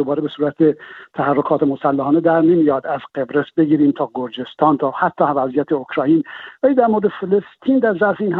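No faults are audible anywhere in the audio.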